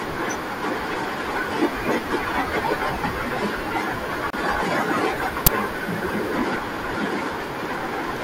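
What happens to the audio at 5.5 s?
An uninitialised buffer breaks through at 5.47 s. For one short stretch the playback path sent out a block before any audio had been written into it, so whatever stale data sat in that memory was read and played as if it were samples. The result is a sudden, loud crack cutting across the speech, lasting roughly 10 ms, which fits a single 10 ms block being played unfilled.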